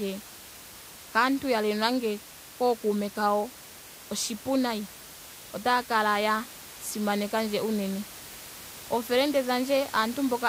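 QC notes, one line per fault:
No technical faults; the signal is continuous and intact, with the room's background noise about 18 dB below the speech.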